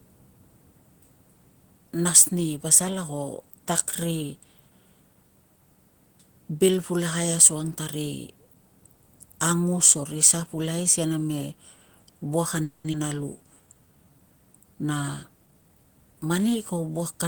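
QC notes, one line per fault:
12.63–12.86 s, call audio freeze: the speech stops moving forward for about 0.23 s. The last sound is carried on as a fading buzz that thins into roughly 10 ms of near-silence before the speech resumes where it stopped, so nothing is lost and about 210 ms of delay is added. The likely cause is packets held up in transit with the jitter buffer running dry. On a spectrogram the final frame's harmonics smear sideways into a decaying band, and the waveform shows a tapering envelope with a brief flat spot.
12.92–12.95 s, skip ahead: playback jumps forward with only about 10 ms of fill, and roughly 150 ms of speech is missing. The two sides are joined almost directly. Here a stretch of audio was discarded while later audio was already queued, which also takes back much of the delay the freeze had just added. A spectrogram shows an abrupt vertical seam where formant tracks break and restart at different positions, and the waveform shows a sudden change in envelope and periodicity.
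13.38–14.17 s, jitter buffer slow-down: over about 0.79 s the speech plays at about 82% speed with pitch unchanged, and roughly 151 ms is added. The receiver was building a reserve by repeating single pitch periods and bits of pause many times over, so sounds are drawn out. A spectrogram shows stretched formant segments with harmonics at normal spacing, and the waveform shows near-identical cycles repeating back to back.
15.46–16.56 s, jitter buffer speed-up: for about 1.1 s the speech runs at about 118% speed with the same pitch, and roughly 200 ms is removed. The buffer held more audio than its target, so short pieces of one or a few pitch periods were cut out in quick succession to shorten the delay, which makes the delivery sound hurried. A spectrogram shows compressed syllables and shortened gaps with unchanged harmonic spacing, and the waveform shows small discontinuities between cycles.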